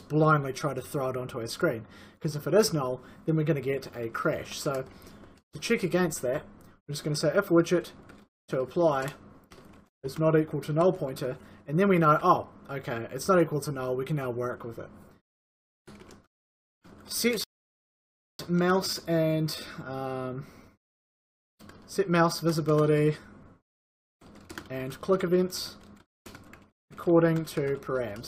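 A rebuffering stall interrupts the audio from 17.44 to 18.39 s, adding about 0.95 s of silence before playback resumes exactly where it stopped, shown as a flat waveform gap and blank spectrogram column.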